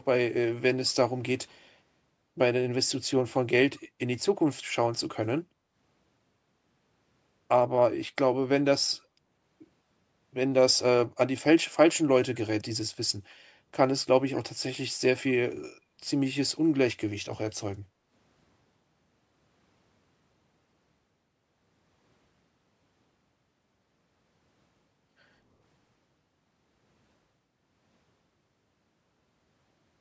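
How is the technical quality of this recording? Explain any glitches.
The recording has two short background dropouts, caused by background gating from the echo canceller. This is call audio, and nothing is heard above 8 kHz. The first dip runs from 15.81 to 15.97 s. The second runs from 17.88 to 18.1 s. While the far-end loudspeaker played, the canceller pulled the microphone down hard. The room tone sinks by about 8 dB, then about 7 dB. Each dip lasts a fraction of a second before recovering.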